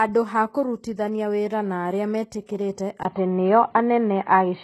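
Across the whole speech clip, the treble has the grainy, metallic sheen of HE-AAC compression, likely at a rate around 16 kbps. Copied-up high bands stand in for the real ones, so sibilants sound plainly damaged. A spectrogram shows smeared, repeated patterns stopping sharply at 12.3 kHz.

Right after "kũrutithania wĩra na arĩa", pre-echo appears from 2.46 to 2.49 s. Coding noise meant for a sharp onset spills about 29 ms ahead of it, so a brief hiss leads the attack and blunts it. The waveform shows a low fuzzy lead-in before the transient.

At 3.03 s comes a 20 ms gap. From there to the end, the band stops at 4.2 kHz, the level shifts by a few decibels, and a new noise floor sits well below the speech. This sounds like the input was likely switched to a poorer device. On a spectrogram, everything above 4.2 kHz vanishes after a thin blank strip.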